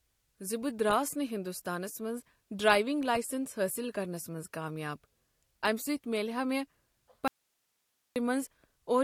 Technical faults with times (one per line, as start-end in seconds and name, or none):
7.28-8.16 audio dropout to a faint residue